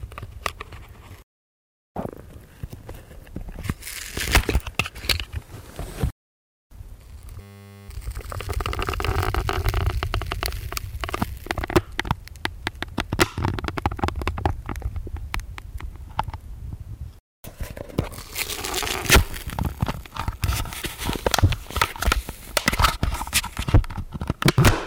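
A clip of everyday sounds with one system hang loop, from 7.41 to 7.89 s. For about half a second, a single 10 ms slice of audio repeats exactly, some 48 times, so it comes across as a steady 100 Hz buzz. That's what you get when the machine or driver stalls and the sound hardware keeps replaying the same tiny ring buffer. Once things recover, playback picks up with essentially nothing skipped.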